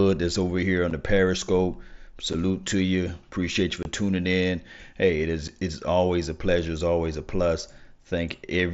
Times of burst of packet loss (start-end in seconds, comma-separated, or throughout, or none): none